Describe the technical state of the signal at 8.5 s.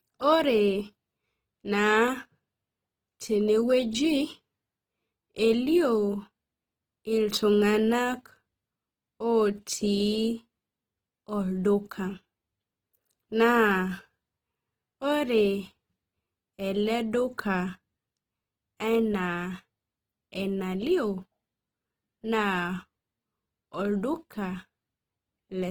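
At 8.5 s, as throughout the clip, the speech shows plainly audible Opus compression, likely in CELT mode at around 16 kbps. Bit-starved bands are refilled by folding or noise, so tones turn grainy and rough while the bandwidth still stays fullband.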